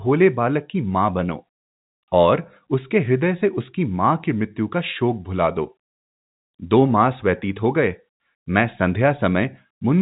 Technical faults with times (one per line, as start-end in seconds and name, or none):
none